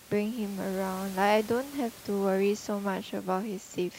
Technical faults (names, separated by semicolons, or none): none